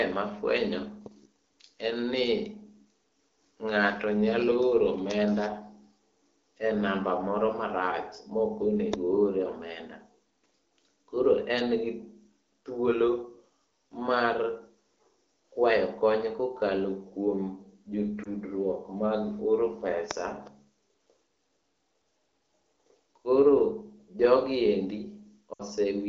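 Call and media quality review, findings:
Lost AMR speech frames. Short warble at 18.24–18.28 s. Longer drop to near silence at 25.53–25.62 s. Sounds like one, then three, corrupted 20 ms frames. Decoder repeats last pitch and vocal-tract settings at falling gain. AMR-WB runs at 12.65 kbit/s.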